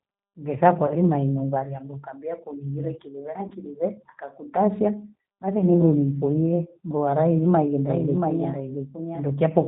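The whole clip has passed through the G.729 codec at 8 kbit/s, and the damage is plainly audible. The codec rebuilds speech from a short-term filter, a pitch predictor and a few pulses per frame. Nothing above 4 kHz survives. The speech sounds band-limited, slightly rough and synthetic. Its texture is grainy rather than natural.

At 0.87 to 0.96 s, packets drop out. This is VoIP packet loss concealed by the speech codec. About 40 ms of audio is missing, which fits four lost 10 ms frames. The decoder fills the gap by repeating its last pitch and filter at falling gain. The result is a short stretched sound that fades. The same happens at 3.48 to 3.54 s, where about 30 ms is lost. It happens again at 5.59 to 5.67 s, where about 10 ms is lost. Each frame builds on the one before. So the sound stays weak or distorted for a moment after each gap, until the decoder recovers.

From 7.9 s to the end, a second copy of the audio enters abruptly. 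This is a doubled audio track. The copy trails the original by roughly seven tenths of a second. It sits about 5 dB lower. It is full-band and dry, with no decay or room colour. So it is not an echo. The likely cause is the same signal being captured twice, once through a slower path.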